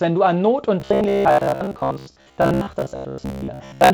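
Audio reaching the playback side too seldom, so that the software likely keeps repeating a buffer of about 15 ms in place of the missing material, produces robotic sound from repeated short buffers in this speech clip from 0.8 s to the end. The repetition imposes a rigid 66.8 Hz buzz, and most of the real audio in that stretch is skipped, leaving a metallic drone that only loosely tracks the speech. The G.722 wideband telephone coding at 48 kbit/s contributes only light coding noise.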